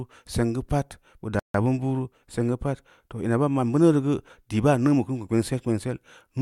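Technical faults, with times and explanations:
1.39–1.54 s, rebuffering stall: the speech drops to silence for 150 ms as the player runs out of downloaded audio, then resumes seamlessly at "bin bunu seng geu".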